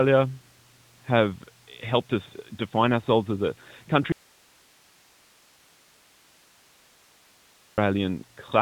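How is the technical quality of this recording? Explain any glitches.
The recording has one serious glitch, an audio dropout to a faint residue, heard through narrowband AMR mobile coding that removes everything above 3.8 kHz. From 4.12 s to 7.78 s, right after "define ourselves as a", the speech cuts abruptly to hiss about 35 dB down for roughly 3.7 s. The likely cause is a signal loss upstream while the path stayed live. On the waveform it appears as a flat, near-empty stretch, and on the spectrogram as a sharp-edged band of faint noise.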